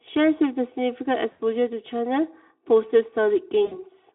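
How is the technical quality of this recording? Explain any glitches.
The recording has two problems: a constant hollow colouring and two brief dropouts in the speech.

Throughout, channel delay (comb filtering) makes the sound hollow and phasey. One channel arrives roughly 3 ms late, and summing the two cancels regularly spaced frequencies from around 200 Hz upward. Unlike reverb, the notches stay fixed and never decay.

At 1.31 to 1.41 s and again at 3.65 to 3.79 s, VoIP packet loss concealed by the speech codec is audible. About 80 ms and 60 ms of audio went missing, and the decoder extended the last sound into a fading buzzy tone or coloured noise. Unlike a clean gap, the sound smears out and stays weak briefly afterward. The narrow telephone-like band, from about 200 Hz to 3.5 kHz, comes from the Speex coding and is only lightly coloured by it.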